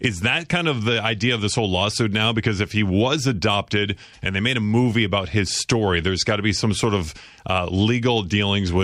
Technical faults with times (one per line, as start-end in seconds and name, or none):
0.20-8.81 clock slip clicks